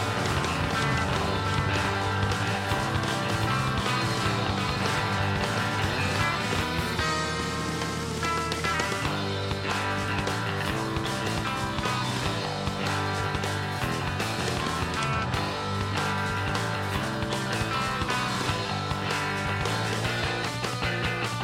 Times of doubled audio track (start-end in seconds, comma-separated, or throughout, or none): 0.00-6.62